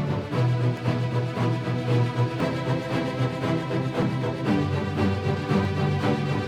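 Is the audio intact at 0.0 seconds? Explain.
Yes, the audio is intact at 0.0 s, with no fault audible at that moment.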